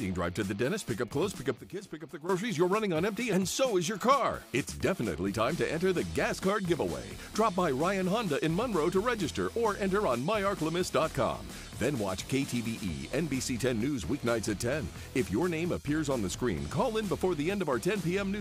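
A sudden gain jump from 1.57 to 2.29 s drops the sound and its background together by about 12 dB, likely a gain setting applied without ramping.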